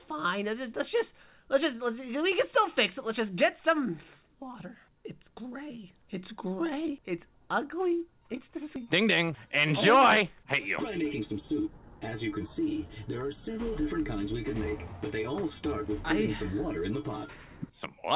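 The audio passes through a call path whose G.711 mu-law coding, consistent with a 64 kbps stream, leaves nothing above 4 kHz. At 8.76–8.78 s there is a skip ahead: roughly 0.4 s of audio is dropped, most likely by an overflowing jitter buffer, and the two sides join directly with no fill, so playback lurches forward. Jitter buffer speed-up follows at 8.85–9.94 s, running at 105%, and again at 10.90–11.34 s at 107%. The receiver trims short pitch-period pieces to shed excess delay, removing several tens of milliseconds in each stretch, so the sound hurries briefly at unchanged pitch.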